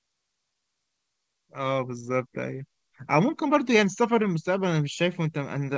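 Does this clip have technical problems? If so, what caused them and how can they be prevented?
Yes. Clock drift between sender and receiver runs through the whole clip. The sender's clock is slower than the receiver's by roughly one and a half percent, so the jitter buffer keeps draining and the receiver has to pad the stream to avoid running empty. Locking both ends to a common clock, or resampling continuously to the sender's measured rate, prevents it.

Repeated timing corrections from 0.54 s to 5.74 s are that padding at work. The receiver repeats short pieces, which slows this stretch to 99% speed and adds about 70 ms overall. The band stops at 8 kHz, as expected from the G.722 call codec. Spreading the correction as gradual time-stretching instead of discrete repeats keeps it inaudible.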